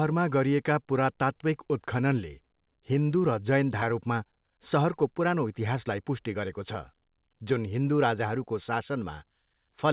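At 3.82 s a stretch of speech was dropped, roughly 0.7 s of it, while later packets were already queued. This is a skip ahead: playback jumps straight to the next speech with no gap or fill, and the two sides are joined abruptly.

From 3.92 s to 6.50 s a jitter buffer speed-up follows. The buffer held more audio than its target, so the receiver repeatedly cut out short pitch-period pieces, about 0.4 s in total. The speech runs 14% faster at an unchanged pitch and sounds hurried, over a narrowband call path with nothing above 4 kHz.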